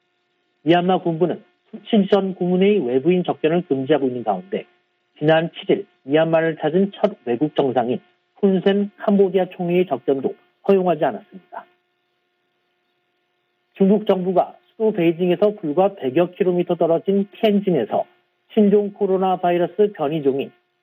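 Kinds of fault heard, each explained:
Imaging from linear upsampling: from 8.93 s to the end, the audio sounds as if its rate was raised by joining samples with straight lines. The band tops out near 8 kHz, which fits a 16 kHz source, and a faint mirrored copy of the spectrum sits between 8 kHz and 16 kHz, about 50 dB down, heard as a thin metallic shimmer. Plain low-pass dulling would leave that region empty, and aliasing would fold content downward rather than mirror it upward.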